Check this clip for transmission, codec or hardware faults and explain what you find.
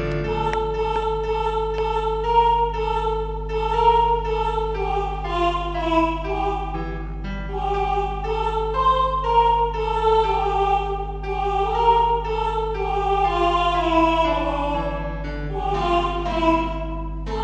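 There's one fault, and it runs the whole way through: mains hum. A steady 50 Hz tone sits under the sound from start to finish, about 10 dB below the signal. It's probably a ground loop or a nearby transformer leaking the power line into the signal path.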